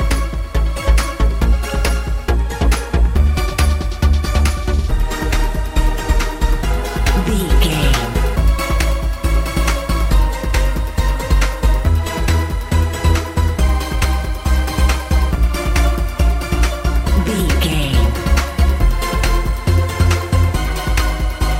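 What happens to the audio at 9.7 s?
A periodic USB or driver dropout lands near 9.70 s, one of a series every 0.5 s from 0.20 to 21.19 s. Each time, a fraction of a millisecond of audio is skipped, producing a regular tick.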